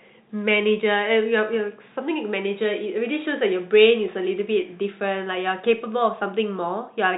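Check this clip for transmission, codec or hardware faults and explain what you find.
Nothing stood out on listening to this speech clip.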